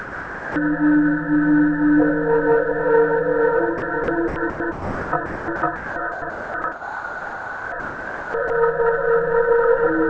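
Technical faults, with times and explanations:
0.00 to 0.56 s: sound dropped by the voice detector. The clip opens with about 0.55 s of the sound missing, replaced by steady synthetic noise. The sound returns at 0.56 s. This is likely the sender's voice detector treating the opening sound as background. It stopped sending, and the receiver filled the gap with comfort noise. Nothing above 8 kHz is heard, which fits a G.722 call path.
3.78 to 8.50 s: sound chopped by the voice detector. Across this stretch the sound keeps breaking up. About 3.1 s in total is replaced by comfort noise. The likely cause is the sender's voice detector switching on and off repeatedly, mistaking parts of the sound for background each time.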